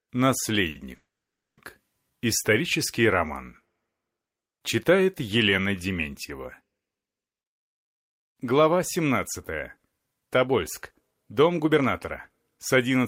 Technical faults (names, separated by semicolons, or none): short stall from a late packet; call audio freeze; jitter buffer speed-up